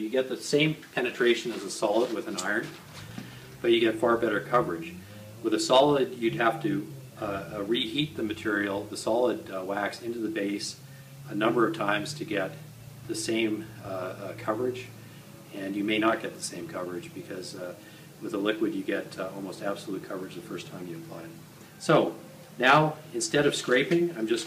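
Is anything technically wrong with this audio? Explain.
Yes, there are two bursts of hard clipping, at 5.73 to 5.80 s and 22.65 to 22.78 s. Both times the signal overdrove a stage by about 4 dB, so the peaks were cut flat. Those flat tops add high harmonics, heard as brief distortion on the peaks.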